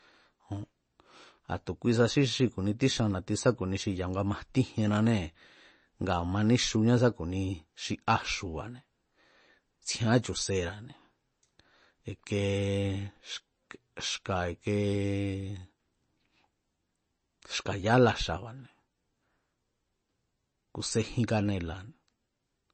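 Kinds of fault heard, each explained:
MP3 compression: watery, swirly speech with nothing above about 8.3 kHz, likely from a low-bitrate encode near 32 kbps cutting treble and dropping weak detail.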